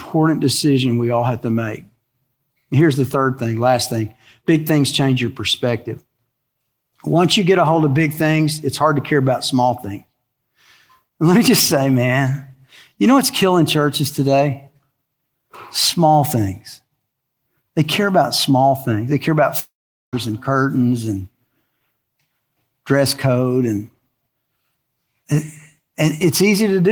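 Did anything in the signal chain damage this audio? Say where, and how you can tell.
Yes. A long network dropout hits the speech from 19.59 to 20.15 s. The last sound is stretched into a fading buzz, then about 0.4 s of near-silence. Speech resumes with about half a second missing. The likely cause is lost network packets, concealed by the receiver.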